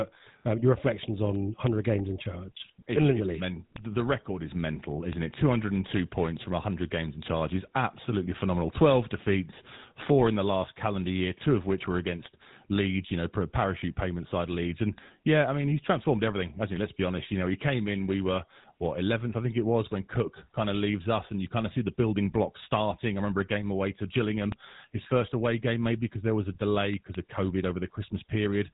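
From the very start, the speech carries the harsh, buzzy, gravelly roughness of the GSM full-rate codec, and the damage is plainly audible. The vocal tract is modelled and driven by coarse pulses. Nothing above 3.8 kHz survives. The sound fits a 13 kbps GSM stream.

Word clock ticks run from 0.2 s to 28.72 s. They are sharp clicks at a steady rate, about every tenth of a second. The receiving clock is not locked to the sender's and drifts by around 200 ppm. At each slip, one sample is dropped or repeated.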